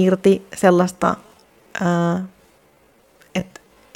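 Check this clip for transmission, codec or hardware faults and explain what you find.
One fault: a time-stretched section. From 0.8 s to the end, the speech suddenly runs at about 0.71 times its pace, sounding dragged. The likely cause is software lengthening the audio by repeating short pieces. Unlike a playback-speed slowdown, the pitch stays unchanged.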